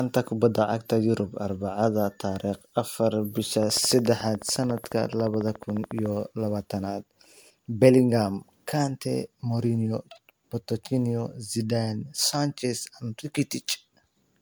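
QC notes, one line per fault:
Throughout: generation loss. The sound is swirly, hollow and smeared with blurred attacks, worse than one 128 kbit/s MP3 pass would give, and content reaches up to 20.1 kHz. This likely comes from roughly seven re-encodings, each adding fresh quantisation noise and spectral holes.
3.63–6.07 s: train of clicks, starting just after "tariq afar bisha". About forty near-identical clicks arrive at a steady 14 per second, peaking about 5 dB above the signal. The regular spacing and uniform shape set them apart from random crackle, pointing to likely electrical interference.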